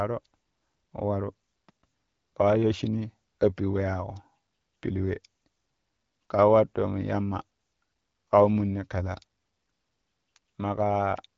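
No technical faults are audible.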